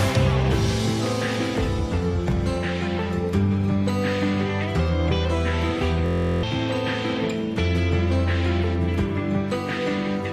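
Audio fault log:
6.06–6.43 s, system hang loop: the computer or its audio driver stalled while the sound hardware kept replaying the same ring buffer, so one 23 ms slice of audio repeats exactly, 16 times, at about 43.1 Hz. The loop length fits a 1024-sample buffer. Because the buffer is so short, the repetition fuses into a steady buzz pitched at the loop rate rather than a stutter. Roughly 0.4 s of real audio is lost.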